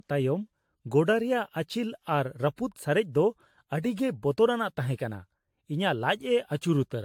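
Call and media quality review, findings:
Generation loss throughout the speech. Swirly, smeared, hollow texture; blurred consonant attacks. Nothing above 18.7 kHz. Likely repeated lossy re-encoding, around seven passes, fitting AAC-type coding near 100 kbit/s. Each pass requantises on a shifted frame grid, stacking noise and spectral holes.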